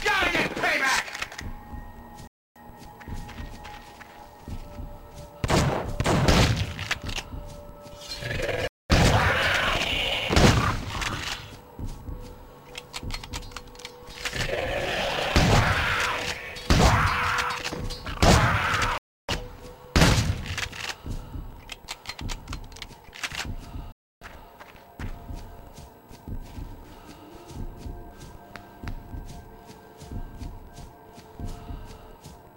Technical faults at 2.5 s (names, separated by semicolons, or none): Bluetooth stall